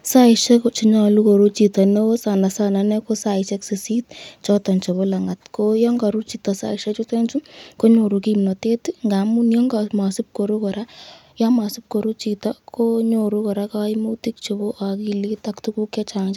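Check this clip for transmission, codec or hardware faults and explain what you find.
Nothing stood out on listening to this speech recording.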